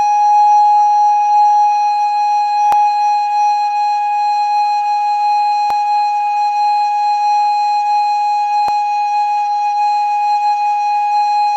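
At 2.72, 5.70 and 8.68 s the music skips forward by a sliver, roughly 20 ms each time, likely audio missing between chunks from a processor working in 3.0 s blocks.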